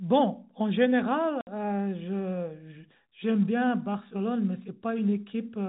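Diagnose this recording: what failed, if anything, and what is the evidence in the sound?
At the network stage, packet loss filled with silence cuts a hard 60 ms hole at 1.41 to 1.47 s. That length fits six lost 10 ms packets. A mute rather than repeated or smeared sound separates it from concealed loss, beneath telephone G.711's 4 kHz ceiling.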